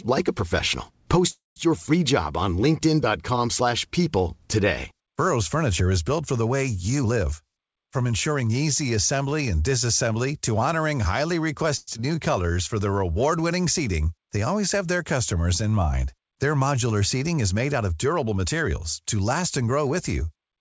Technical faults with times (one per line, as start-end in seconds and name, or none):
1.30-1.58 call audio freeze
6.98-8.50 jitter buffer speed-up
11.77-11.96 long network dropout
12.15-12.54 jitter buffer slow-down
17.37-18.46 jitter buffer speed-up